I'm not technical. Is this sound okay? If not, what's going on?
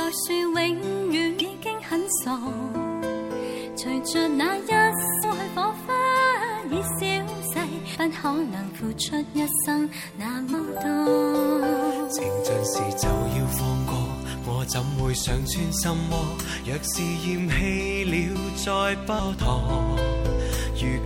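No. There are three brief glitches, each a case of damaged data in a compressed stream. You can hear them from 1.40 to 1.42 seconds, then at 5.23 and 7.94 seconds. Each is a tiny chirp or blip. The audio was stored in a squeezed-down file format, and a few pieces of that file got scrambled. The player couldn't read those bits, so it stumbled briefly before finding its place again.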